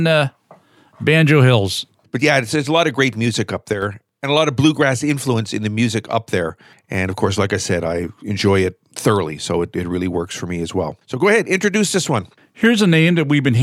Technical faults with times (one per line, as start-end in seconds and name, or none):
3.73-3.82 one channel drops out